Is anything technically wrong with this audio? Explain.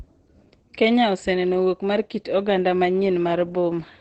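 Yes. Throughout the speech there is heavy damage consistent with Opus compression. Nothing is present above about 8.5 kHz, a wideband ceiling, and the sound is muffled and hoarse rather than swirly. That points to the encoder running in its SILK speech mode, likely at a very low rate in the region of 12 kbps, where the codec models the voice with a simplified predictive coder and discards the upper band entirely, leaving a dull, rough-edged tone.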